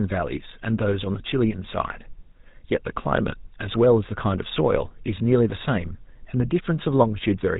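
GSM full-rate codec damage runs through the whole speech recording, from start to finish. The codec reduces the voice to a vocal-tract filter excited by evenly spaced pulses, keeping only one excitation sample in three, and it discards everything above 4 kHz. The result is plainly audible: a dull, band-limited voice with a buzzy, gravelly grain, consistent with the 13 kbps full-rate mode.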